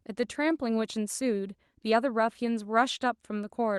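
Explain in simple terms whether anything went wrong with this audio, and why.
Nothing went wrong here; the speech just came through an ordinary internet call connection, which carries the sound up to about 12 kHz, and nothing along the way stands out as a problem.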